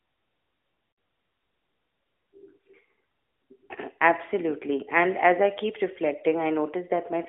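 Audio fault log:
0.92 to 0.98 s, lost AMR speech frames: a run of three frames, 60 ms in all, goes missing. The decoder stretches the last good pitch and vocal tract settings at falling gain, so the speech smears and sags briefly.
2.87 to 3.02 s, lost AMR speech frames: four single 20 ms frames are dropped, scattered across 160 ms. Each is a short concealment patch, so you get a string of quick warbly dips rather than one fade.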